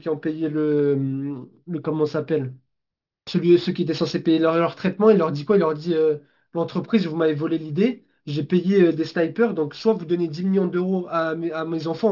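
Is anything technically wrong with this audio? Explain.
Yes, there is aliasing throughout. The audio was downsampled without an anti-aliasing filter, with content folding at 6 kHz, which fits a 12 kHz rate. The folded energy, roughly 25 dB below the speech, makes sibilants gritty and metallic.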